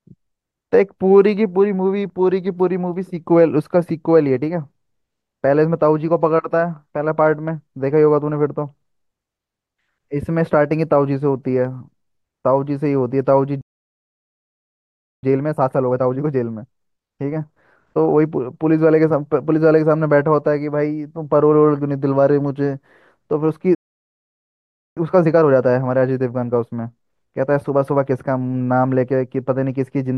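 The speech cuts to silence at 13.61 s and stays dead for about 1.6 s until 15.23 s, a playback stall, likely from the player running dry of data or its thread being blocked. From 15.23 to 18.23 s the talk comes back hurried but at normal pitch. This is time-compressed catch-up: the player trims and cross-fades short slices to run 1.25 times faster and clear its backlog. A second stall silences the speech from 23.75 to 24.97 s, about 1.2 s. A milder catch-up follows from 24.97 to 27.97 s at 1.1 times speed.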